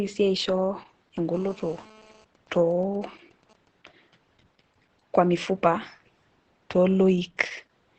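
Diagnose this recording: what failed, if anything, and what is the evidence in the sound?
The codec stage failed: Opus voice compression ran in its SILK speech mode at a rate low enough to confine the audio to wideband, about 8 kHz, with coarse excitation. Throughout, speech sounds muffled, hoarse and slightly robotic, which fits roughly 10 kbps.

A GSM phone buzz entered through the analogue wiring from 1.34 to 2.25 s. A nearby 2G handset on a call transmitted bursts 217 times a second, and the audio circuit rectified them into a steady, raspy 217 Hz buzz rich in harmonics, about 27 dB below the speech.

GSM signalling bursts follow in the same analogue path from 2.35 to 3.68 s. With its user silent mid-call, the phone sent only sparse groups of bursts, so the rectified interference becomes even ticks with a longer 217 Hz buzz twice a second, roughly 30 dB below the speech.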